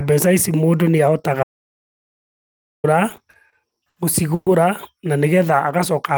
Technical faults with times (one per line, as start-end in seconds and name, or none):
1.43-2.84 audio dropout to silence
3.09-3.98 repeated stalls (stutter)
4.34-4.48 call audio freeze